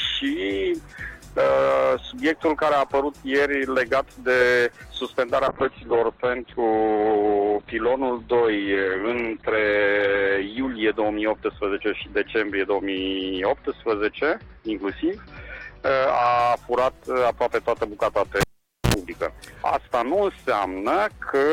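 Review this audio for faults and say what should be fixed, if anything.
Call bitrate drop, 5.49 to 16.45 s: the bandwidth estimate fell and the encoder went from 48 to 8 kbps. Coarser coding and a top end cut from 20 kHz to 4 kHz leave the sound rough and muffled, worst for about 5.3 s.

Cable pulled and plugged in, 18.41 to 18.94 s: a live cable came out, giving a pop and roughly half a second of near silence. A 72 ms burst of 60 Hz mains buzz as the tip touched came before the second pop.

To prevent both, keep network headroom so the call's bitrate holds steady, and mute the channel before touching or reseating any connected cable.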